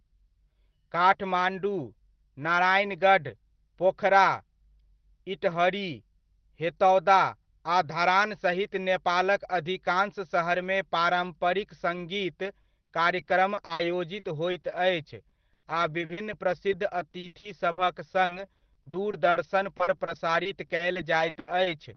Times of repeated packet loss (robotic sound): 12.45-13.81, 14.19-17.79, 18.25-21.67

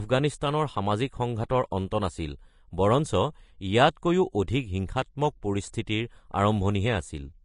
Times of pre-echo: 0.40, 5.73

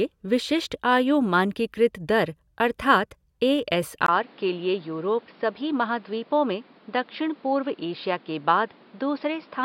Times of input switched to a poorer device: 4.06-9.65

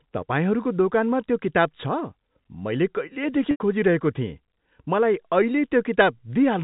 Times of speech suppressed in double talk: none

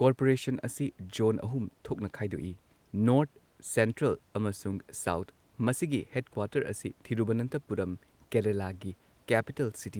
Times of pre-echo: none

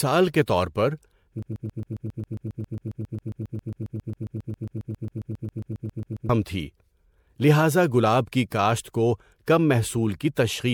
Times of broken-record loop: 1.42-6.29

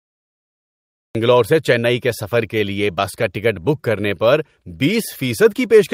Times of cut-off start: 0.00-1.15

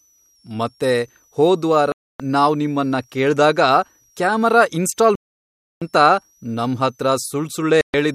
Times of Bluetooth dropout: 1.92-2.20, 5.15-5.82, 7.81-7.94

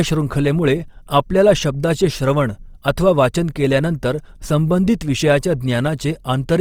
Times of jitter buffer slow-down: none

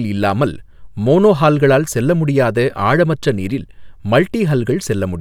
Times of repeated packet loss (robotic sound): none

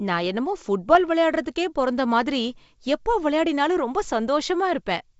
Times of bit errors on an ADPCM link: 0.89-0.96

